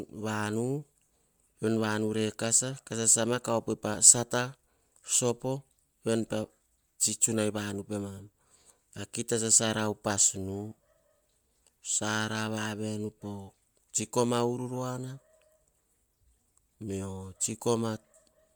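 Throughout, the speech has a plainly grainy, breathy edge from noise-filled highs, likely Bluetooth LC3 compression. Unlike plain band-limiting, content still reaches 20.1 kHz.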